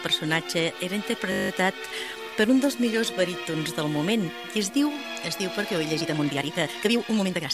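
From 1.32 to 1.5 s there is a system hang loop: a 20 ms piece of audio repeats exactly nine times, producing a steady buzz at 50 Hz. The driver stalled while the hardware kept replaying its ring buffer, which fits a buffer of about 20 ms.

From 5.98 s to the end, the pace jumps to about 1.9 times normal speed while pitch stays unchanged, giving a rushed texture. This is a time-stretched section, likely from software compressing the audio by dropping short pieces.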